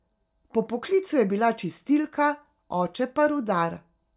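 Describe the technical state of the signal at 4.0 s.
At 4.0 s the signal is intact, with no audible technical fault at that moment.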